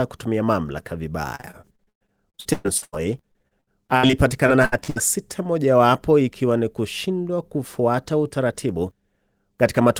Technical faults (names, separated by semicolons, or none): repeated packet loss (robotic sound)